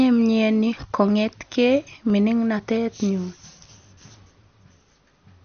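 From the start, the speech sounds dull and gurgling with nothing above 6.5 kHz. This is likely MP2 compression at a low rate, fitting about 48 kbps, with upper sub-bands switched off and the rest coarsely quantised. Between 0.74 and 4.82 s a short click recurs every 1.36 s, four in all. These are likely clock drift buffer slips: two mismatched clocks, a few hundred ppm apart, let the buffer drift until a handful of samples is dropped or repeated.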